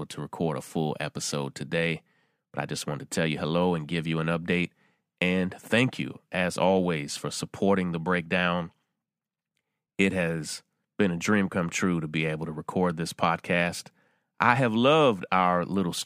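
Listening to this speech recording, nothing stood out as a technical problem at any point.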